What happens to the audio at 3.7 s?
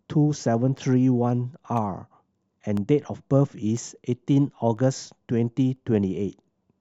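Periodic USB or driver dropouts run from 0.77 to 5.76 s, so 3.7 s falls inside them. Once a second, something stalls the audio path and a tiny sliver, around half a millisecond, drops to silence, leaving a regular tick over the speech.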